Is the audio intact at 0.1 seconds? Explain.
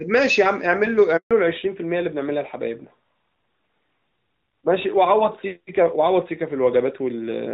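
Yes, the speech at 0.1 seconds is intact, with no fault to be heard at that moment.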